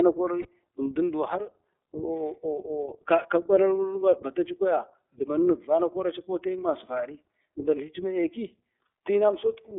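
Throughout, the speech passes through the iLBC codec, whose plainly audible coding leaves it clear but rough and slightly synthetic. It runs in the 30 ms frame mode at around 13.33 kbps. A spectrogram shows energy confined to 300 Hz to 3.6 kHz, with a hard empty ceiling above.

From 0.42 to 0.46 s, one lost iLBC frame of 30 ms is concealed. The decoder repeats the last pitch cycle blended with noise, heard as a brief buzzy held vowel. The waveform shows a short run of near-identical periods, and the sound recovers immediately afterward.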